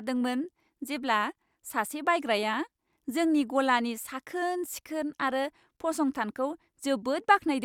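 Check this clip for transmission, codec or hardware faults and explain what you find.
Nothing in the speech signal points to a transmission, codec or hardware problem: level, continuity and frequency content stay steady throughout.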